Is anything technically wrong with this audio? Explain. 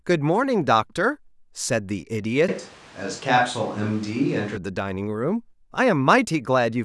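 Yes. From 2.49 to 4.57 s there's a switch to a distant microphone: the close microphone's signal likely dropped out, leaving a farther pickup. The speech turns suddenly roomy and hollow, with thinner bass and room noise about 25 dB below it, though the level barely changes.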